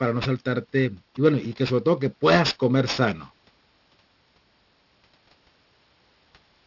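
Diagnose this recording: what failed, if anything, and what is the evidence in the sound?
Aliasing from sample-rate conversion, throughout. Gritty sibilants fold back below 6 kHz, fitting an unfiltered drop to 12 kHz. Aliases sit about 15 dB down.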